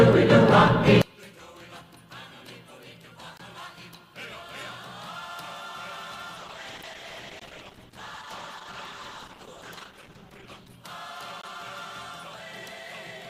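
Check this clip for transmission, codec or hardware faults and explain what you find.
Three kinds of fault are present: a polarity problem from about 1.02 s to the end, a call bitrate drop between 6.36 and 10.83 s, and three gaps between chunks.

One channel inverted: from 1.02 s onward, the summed level falls by about 27 dB. The cause is likely one stereo channel with reversed polarity, so whatever the two channels share cancels when they are combined to mono. What remains is only the difference between them, a faint residue in place of the full centred content.

Gap between chunks: the stream arrives in 4-second chunks, and a silent hole of 20 ms opens at each join, at 3.38, 7.40 and 11.42 s. The regular spacing fits a player that starts each chunk slightly late, or padding between chunks. Nothing is lost. The sound simply stops and restarts at each point.

Call bitrate drop: at 6.36 s the call's bandwidth estimate collapsed, and the encoder was pushed from 48 kbps down to 11 kbps. 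It stayed at that floor for about 4.4 s before recovering at 10.83 s. At this rate the encoder codes coarsely and trims the top end, so the audio turns rough, watery or muffled for that stretch. The gap at 7.40 s falls inside this degraded section.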